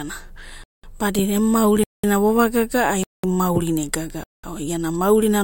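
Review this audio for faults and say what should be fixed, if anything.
Gap between chunks: the speech cuts out for 200 ms at 0.64–0.84, 1.84–2.04, 3.04–3.24 and 4.24–4.44 s. Silence is inserted at each join between one-second chunks. The waveform shows flat holes with hard edges, and the spectrogram shows blank vertical bands. To prevent it, trim any padding and queue chunks back to back so each starts immediately.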